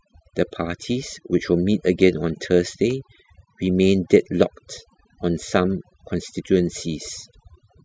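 Speech, and the whole clip suffers from overdone noise removal: the denoiser was pushed too hard, so bands near its noise estimate get shut off, taking the softer parts of the voice with them. The background drops and breaks up into twinkly specks.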